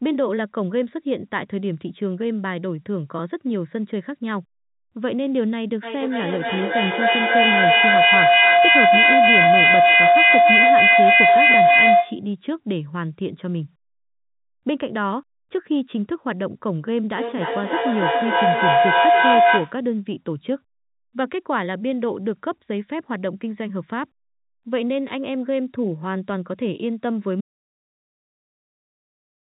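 From 17.12 to 19.87 s, a feedback howl builds as the microphone-to-loudspeaker loop gains level: a tone near 700 Hz, with the loop repeating roughly every 0.3 s, reaching about 8 dB above the speech. It shows as a bright horizontal spectrogram line.

At 27.41 s the audio drops out to silence through the end, likely from a lost input. The waveform becomes a flat line and the spectrogram goes completely blank.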